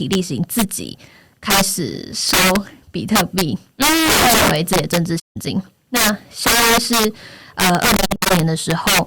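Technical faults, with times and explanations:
Throughout, integer overflow: the signal is driven about 12 dB past the integer limit, so around one sample in twenty wraps to the opposite extreme instead of being held at full scale. Each loud peak becomes a violent crack, far harsher than ordinary clipping.
5.19–5.37 s and 7.97–8.31 s, AAC frame loss with muting: the first is a single hole of about 0.17 s, consistent with eight frames lost. The second spreads over 0.34 s in broken gaps, longest near 70 ms. The decoder zeroes the missing spectra, and overlapping windows fade the sound softly out and back in.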